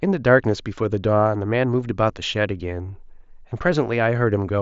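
Nothing is technically wrong with this speech clip, which comes through a Bluetooth mSBC headset link working as expected.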